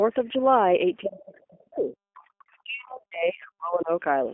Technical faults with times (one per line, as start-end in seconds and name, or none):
0.00-4.34 G.729 codec
1.05-3.90 speech suppressed in double talk
1.19-1.23 other side's voice leaking through
2.52-2.57 other side's voice leaking through